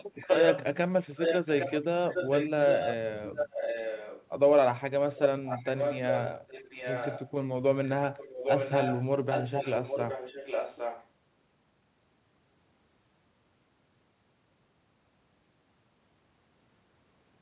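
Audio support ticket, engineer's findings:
Echo leak at 0.15–0.64 s, 1.1–4.27 s, 5.16–7.3 s and 7.84–11.07 s: delayed copy of the speech trailing by about 0.81 s, first burst roughly as loud as the speech, later ones a few dB down. Likely the far end's loudspeaker-mic echo canceller missing it; heard band-limited to 4 kHz like the G.711 path.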